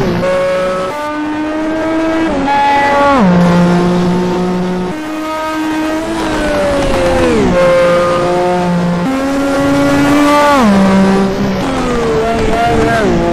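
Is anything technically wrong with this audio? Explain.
Yes. De-emphasis applied wrongly, from 1.07 to 3.41 s: a treble-cutting curve was applied to audio that carried no matching pre-emphasis boost, or was applied a second time. The response rolls off smoothly upward, about 11 dB down at 10 kHz relative to 1 kHz, so the sound turns dull and muffled.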